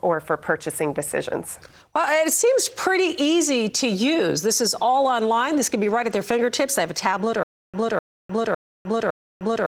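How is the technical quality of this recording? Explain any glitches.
There's one real glitch, heard through light Opus voice compression at 20 kbps. From 7.43 s, right after "have a tablet", a stutter with silent gaps runs to the end. A 254 ms fragment repeats four times, each time followed by 0.3 s of dead silence, likely from a stalled stream replaying its last fragment and then running dry.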